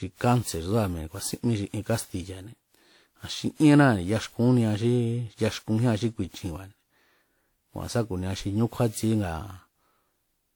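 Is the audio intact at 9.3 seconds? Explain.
No. Generation loss runs through the whole clip, including 9.3 s. The sound is swirly, hollow and smeared, with blurred attacks, likely from about seven rounds of lossy WMA re-encoding near 96 kbit/s. A spectrogram shows smudged onsets below 20.1 kHz.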